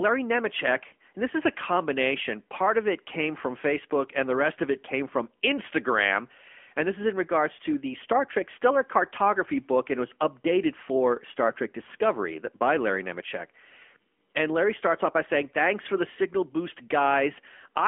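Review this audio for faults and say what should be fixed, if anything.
AMR narrowband mobile codec damage throughout: nothing above 3.5 kHz, a buzzy, synthetic speech texture from pulse-driven vocal-tract modelling, consistent with a 10.2 kbps mode. Record over a wideband or direct path instead of a narrowband mobile call.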